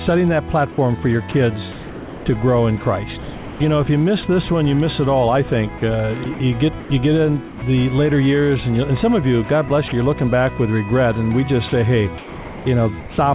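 The sound comes through a narrowband call path with nothing above 4 kHz, consistent with G.711 A-law at 64 kbps. It gives way to steady synthetic hiss at 0.72–0.78 s, 3.22–3.6 s and 7.48–7.62 s, the longest gap lasting about 380 ms. That's likely sound dropped by the voice detector, with the sender treating it as background and the receiver filling in comfort noise. At 1.32–2.26 s, 5.78–6.9 s, 9.68–9.92 s and 11.68–13.18 s the sound turns choppy, with two or more holes filled by comfort noise, likely sound chopped by the voice detector as it keeps toggling sending on and off.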